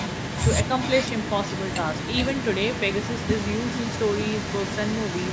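Speech in which the far end's echo canceller has likely failed to remove its loudspeaker pickup, an echo leak. Throughout the clip, from 0 to 5.3 s, a delayed copy of the voice trails it by 0.42 s at around 10 dB below the speech, within the call's 8 kHz band.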